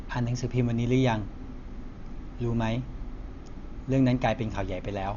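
Speech, likely squeezed through Dolby Digital compression at a starved bitrate, about 48 kbps: nothing above 6.9 kHz, leaving it dull and heavily roughened by fluttering noise throughout.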